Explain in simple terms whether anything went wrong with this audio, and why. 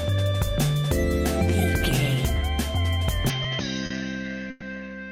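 From 3.30 s to the end, the sound suddenly turns duller and a little quieter, as if heard through a cheaper microphone. Nothing is left above about 6.4 kHz, and a faint new background noise comes in, with no gap at the change. The likely cause is that the input switched to a poorer device partway through, one that passes a narrower range of sound and brings its own tone and noise.

Between 3.86 s and 3.93 s there is a tiny hitch, where one moment of sound is held a bit too long. This is a short stall from a late packet. A piece of the audio arrived about 40 ms late, so the receiver stretched the last bit of sound to cover the wait, then carried on from the same spot, with nothing lost.

From 4.50 s to 4.64 s the sound briefly freezes into a fading buzz or hiss before picking up again where it stopped. This is a call audio freeze, likely caused by a delay of about a tenth of a second on the way. 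The receiver filled the wait by continuing the last sound, so a small pause was added to the audio, but nothing was actually dropped.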